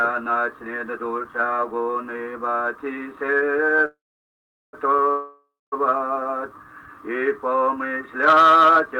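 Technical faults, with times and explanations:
3.85 to 4.75 s, call audio freeze: The sound stops and a short fading buzz carries the last moment on, then about 760 ms of silence follows. Packets were likely held up and the jitter buffer ran dry. When they arrive, playback resumes where it stopped, so nothing is lost and the audio after it is about 0.88 s late until the next stall.
5.11 to 5.74 s, call audio freeze: A second stall inserts about 0.61 s, with a longer fade and only about 230 ms of silence.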